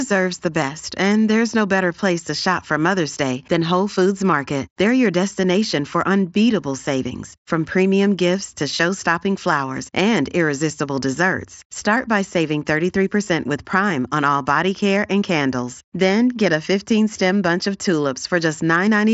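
No technical faults occur in this speech, which arrives over a Bluetooth mSBC headset link working as intended, with nothing above 7.7 kHz.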